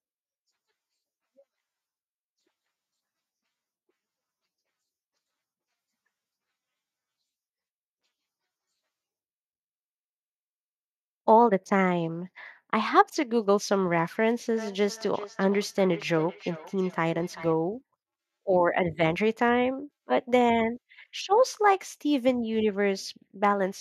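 From 14.53 s to 17.57 s the speech is followed by feedback echo between two devices: a second device in the same room replays this microphone's signal, and the microphone picks that playback up again, which its own echo canceller cannot remove. Each phrase returns roughly 0.4 s later, thinner and ringing, peaking about 17 dB below the speech. The fixed, regular delay is what separates it from room reverberation, which smears sound continuously rather than repeating it.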